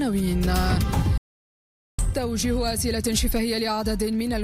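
At 1.18 s the sound cuts to silence and stays silent until 1.99 s, a playback stall of about 0.81 s. The player likely ran out of data or had its output thread blocked. Unlike a dropout, the gap is long.

From 1.99 s to the end, time-compressed catch-up follows. The player shortens its backlog by cutting small pieces and cross-fading across them, so the audio runs about 1.1 times faster at unchanged pitch. Unlike simple speed-up, pitch stays put.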